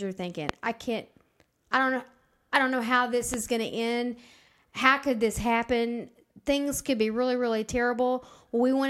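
Loud pops land at 0.49–0.51 s and 3.34–3.36 s: single sharp clicks jumping around 20 and 15 dB above the speech, likely voltage spikes from a plug or switch.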